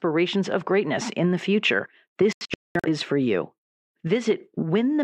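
At 2.33 s the receiver stops getting usable frames, a digital broadcast dropout that lasts until 2.88 s. Frames fail to arrive or fail their checks, so the decoder mutes instead of playing corrupted data. The speech breaks into several short silent holes rather than one gap: about 384 ms goes missing, scattered across roughly 512 ms, with the longest hole about 213 ms. Whatever was said in those holes is lost, and the speech picks up again afterwards.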